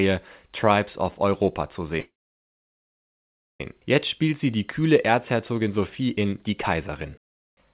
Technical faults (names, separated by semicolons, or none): call audio freeze; jitter buffer speed-up